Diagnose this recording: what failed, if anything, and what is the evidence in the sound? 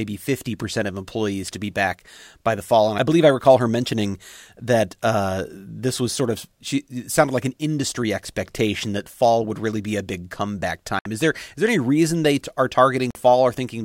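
Bluetooth stall at 10.99 s, just after "be a big comeback", and again at 13.11 s: the speech cuts to silence for 64 ms, then 45 ms, before resuming. The likely failure is the wireless playback link, where delayed packets emptied the headphone buffer until retransmissions arrived.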